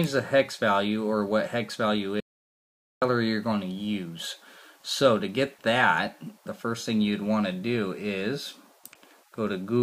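The input was likely lost while recording continued, so from 2.20 to 3.02 s an audio dropout to silence leaves about 0.82 s of total, roomless silence.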